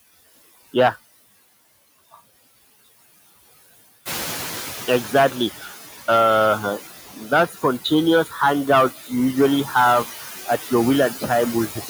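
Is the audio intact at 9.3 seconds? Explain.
No. Throughout the clip, including 9.3 s, a noise suppressor pulls down bands it judges to be steady noise by about 13 dB. With the room noise stronger since about 4 s, the noise sinks between words and swells under speech.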